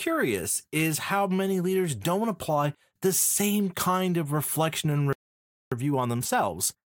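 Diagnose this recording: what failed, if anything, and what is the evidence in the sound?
The failure sits at the playback stage. A playback stall begins at 5.13 s, right after "kind of reflection and": the speech cuts off in mid-flow and the output stays fully silent for about 0.59 s, until 5.72 s. It is likely a player starved of buffered data or a blocked audio thread. Unlike a network dropout, which loses a stretch of speech, the flow here simply halts with silence and then resumes.

From 5.72 s to the end at 6.89 s, time-compressed catch-up follows the stall. The speech runs at 1.25 times normal speed while its pitch stays unchanged, as small segments are cut out and cross-faded to drain the backlog built up during the stall. A clock or sample-rate mismatch would also speed up the audio, but it would raise the pitch and affect the whole clip, not just the stretch after the gap.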